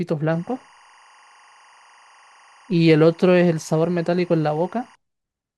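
Speech carries timecode bleed from 0.32 to 4.95 s, a chirping warble near 1 and 2 kHz, about 30 dB down, whose alternating pitches set it apart from a steady whine.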